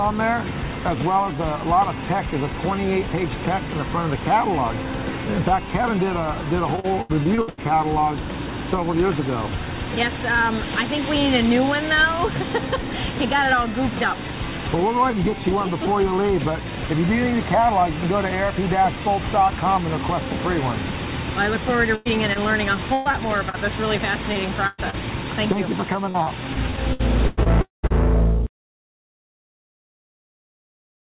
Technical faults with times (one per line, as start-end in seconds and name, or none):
6.76-7.59 repeated packet loss (robotic sound)
21.95-24.95 repeated packet loss (robotic sound)
26.09-27.92 repeated packet loss (robotic sound)
27.61-27.85 long network dropout